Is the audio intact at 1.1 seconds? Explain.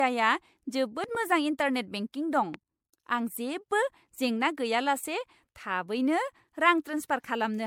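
No. Between 1.04 and 1.17 s there is a loud pop, likely from a sudden voltage pulse such as a switch or static, heard as two sharp pops about 5 dB above the speech, which continues underneath. The audio at that point also shows generation loss, likely from repeated MP3 encoding at 96 kbit/s, around five passes, each quantising on a shifted frame grid. This leaves the speech swirly, hollow and blurred at its attacks.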